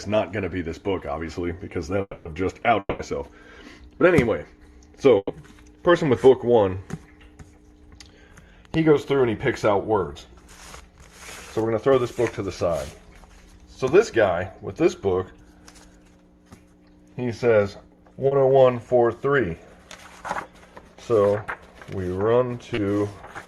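Between 2.01 and 2.27 s, and again from 2.79 to 3.01 s, the sound breaks off and a fading buzz or hiss stands in for about 240 ms and then 200 ms, each trailing into roughly 40 ms of silence before the audio resumes further on. This is a long network dropout, likely a stretch where no packets arrived at all.

At 5.17 to 5.31 s, a burst of packet loss cost about 120 ms of audio. The receiver held and faded the last sound across the gap, followed by about 30 ms of silence, so a brief held buzz or fading hiss replaces what went missing.

Short concealed packet loss occurs at 18.27 to 18.33 s and 22.75 to 22.79 s. The decoder missed about 40 ms and then 20 ms of data and patched each hole by extending the preceding sound. Each patch comes through as a quick smear or wobble.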